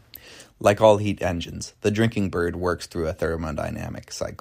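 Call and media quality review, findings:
No audible faults found.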